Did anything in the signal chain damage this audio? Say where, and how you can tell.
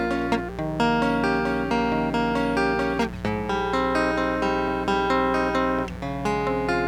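Yes. Mains buzz runs through the whole music clip, a steady raspy hum only about 10 dB under the music. It arises in the analogue wiring: switching spikes, twice per 60 Hz cycle, leak in through poor shielding or a dimmer, stacking harmonics into the kilohertz range.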